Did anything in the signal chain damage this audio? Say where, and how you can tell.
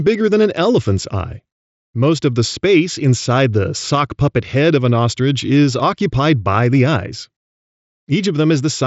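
No, nothing in the chain damaged this one; the speech comes over a Bluetooth headset link running the mSBC codec, so the top end stops around 7.7 kHz, which is simply how that link sounds.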